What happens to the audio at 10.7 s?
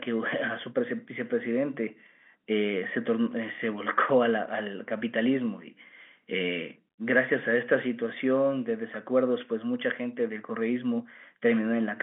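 Nothing goes wrong at 10.7 s: the speech continues intact through the telephone-band G.711 coding, with no dropout, click or distortion at that point.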